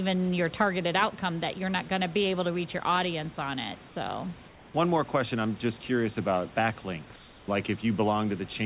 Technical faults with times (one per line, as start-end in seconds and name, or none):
3.88-3.96 comfort noise in place of the background
4.48-4.74 comfort noise in place of the background
7.16-7.48 comfort noise in place of the background